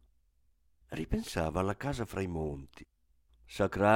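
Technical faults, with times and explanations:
No technical faults detected.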